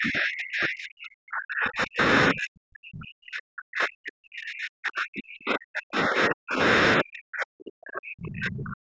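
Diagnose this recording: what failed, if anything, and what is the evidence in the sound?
The call processing stage is at fault: the echo canceller most likely mistook double talk for loudspeaker echo and suppressed the near-end speech along with it. The speech is pushed down, by as much as roughly 40 dB at its deepest, across three long stretches, from 0.0 to 2.0 s, 2.32 to 6.61 s, and 7.0 s to the end, with only brief recoveries at about 2.0 to 2.3 s and 6.6 to 7.0 s. The call's microphone path, band-limited below 8 kHz, is also present.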